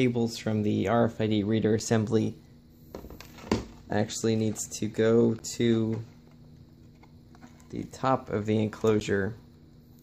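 A block of digital silence cuts through the audio at 1.79 s, 5.39 s and 9.0 s, about 6 ms at the first and 10 ms at the others. The sound cuts out abruptly with no fade, producing a tick or dip each time, which suggests the output buffer was not filled in time.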